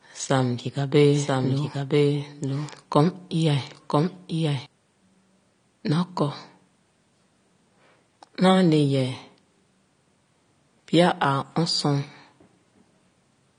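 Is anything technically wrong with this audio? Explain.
Yes, there are two faults. Throughout, the speech sounds dull and smeared, with nothing above 9.7 kHz. This is likely AAC compression at a low bitrate, around 32 kbps. From 1.14 to 4.66 s, a doubled audio track is heard. A second full-band copy trails about a second behind, roughly 5 dB quieter, and starts and stops abruptly. The likely cause is a second capture path.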